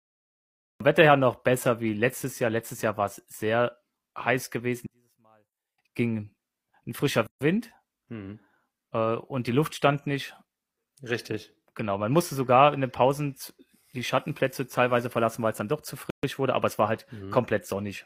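Cut-off start, 0 to 0.80 s: the speech recording opens with digital silence and then jumps in mid-sound at 0.80 s, with no attack or fade-in, because capture began after the speaker was already talking. One channel inverted, 4.86 to 5.78 s, just after "war es sehr heiß" and before "ging ein frischer": heard in mono, the centred voice drops by about 36 dB to a faint residue. The likely cause is one stereo channel flipped in polarity, so the shared centre content cancels when the channels are summed. Gap at a join of encoded pieces, 7.27 to 7.41 s (142 ms) after "ging ein frischer", and 16.10 to 16.23 s (131 ms) between "es dann doch zu" and "wurde aber es war": a short silence with smeared edges opens in continuous speech. Each piece was encoded separately, and the encoder's start delay and end-frame padding were left in at the join.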